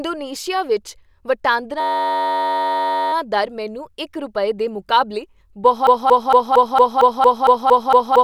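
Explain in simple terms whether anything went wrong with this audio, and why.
Two things go wrong. From 1.80 to 3.13 s there is a system hang loop: the computer froze while the sound hardware kept replaying a tiny 10.7 ms slice, which fits a 512-sample buffer. That slice repeats so fast it becomes a steady buzz at about 94 Hz, and speech resumes with "ਦਰ ਮੈਨੂੰ ਇੱਕ ਰੁਪਏ".

From 5.87 s to the end, a 0.23 s piece of speech plays ten times back to back. This is a broken-record loop, likely caused by the player or stream stalling and resending its last fragment. The piece is long enough to hear as a repeated chunk rather than a buzz, and the speech that should follow is lost.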